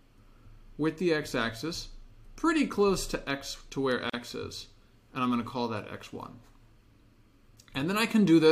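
A gap at a join of encoded pieces opens at 4.10 s and lasts until 4.14 s, a silence of 39 ms in otherwise continuous sound. The audio was encoded in separate pieces and butted together untrimmed, so encoder start-up delay and last-frame padding remain.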